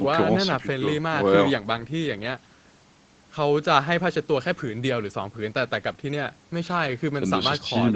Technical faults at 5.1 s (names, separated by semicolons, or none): none